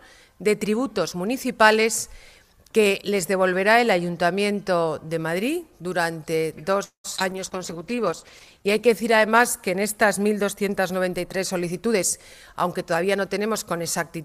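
The audio is interrupted at 6.83 s by a call audio freeze lasting until 7.06 s. The last sound is stretched into a decaying buzz for a short while and then drops out, about 120 ms of it silent, before the audio resumes where it stopped. Nothing is lost; roughly 0.21 s of extra time is inserted. The likely cause is delayed packets that emptied the jitter buffer, leaving the receiver to extrapolate the final sound until fresh data arrived. Almost immediately after, at 7.16 to 7.20 s, comes a skip ahead: around 70 ms of audio is discarded and the two sides are butted together with only a tiny bridging fill. This cuts about 50 ms of delay in one jump. Directly after that jump, 7.20 to 7.22 s carries a short concealed packet loss. About 20 ms of data never reached the decoder in time, so the gap was patched by continuing the preceding sound and cross-fading back into real audio, heard as a brief smear or wobble right at the join. 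From 7.32 s to 12.07 s a call bitrate drop takes hold. The encoder is pushed from 96 kbps down to 12 kbps and sits at that floor for roughly 1.2 s. At that rate Opus quantises coarsely and removes the upper band, so the sound turns muffled and rough, with a watery texture, before quality climbs back toward the end of the span. Overlapping it, 7.59 to 8.10 s is a jitter buffer slow-down, with playback at 91% speed. Pitch periods and gaps are repeated to add 50 ms of reserve, which drags sounds out at unchanged pitch and can produce a faint warble. The reverse, a jitter buffer speed-up, occurs twice. From 11.75 to 12.00 s playback runs at 122%, with roughly 70 ms trimmed out in small pitch-period pieces, audibly hurried. From 12.52 s to the end of the clip it runs at a milder 106%, shaving off about 100 ms as the receiver works the accumulated delay back down to its target.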